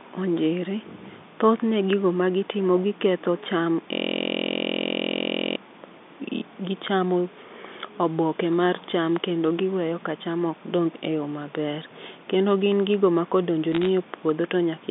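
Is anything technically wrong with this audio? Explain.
Yes, two faults stand out.

A system hang loop runs from 3.93 to 5.56 s. The computer or its audio driver stalled while the sound hardware kept replaying the same stretch of its ring buffer. That stretch is 23.22 ms long, which fits a 1024-sample buffer, so it repeats at 43.1 Hz. Because the looped piece is so short, the speech gives way to a steady, rough buzz at that rate for about a second and a half before normal audio resumes.

Bit errors on a digital phone line hit between 13.73 and 13.87 s. The speech passes through G.711 A-law telephone coding, limited to roughly 200 Hz to 3.6 kHz, and here some of its 8-bit samples had bits flipped in transmission, at a rate of roughly 0.4 percent. Each corrupted sample jumps to a wrong value, and flips on the sign or upper bits turn into sharp ticks. Together they form a brief burst of crackle laid over the speech, lasting about 140 ms.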